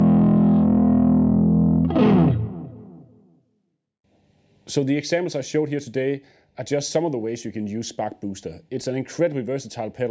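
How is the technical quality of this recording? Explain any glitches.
Nothing stood out on listening; the audio carries the usual character of a call's microphone processing, with the deepest bass trimmed and nothing above about 8 kHz, and no glitches are heard anywhere in it.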